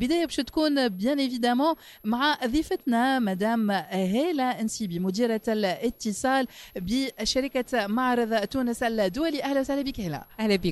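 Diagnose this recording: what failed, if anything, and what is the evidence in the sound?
A switching supply whistle sits under the sound for the whole recording, an analogue-stage fault in the power or wiring feeding the signal chain. It is a thin high tone wandering between about 11.4 and 11.7 kHz, roughly 35 dB below the programme. A converter in burst mode, or beating against another supply, couples its switching ripple into the audio. On a spectrogram it shows as a faint horizontal line drifting within that band from start to end. It is too small to see in the waveform.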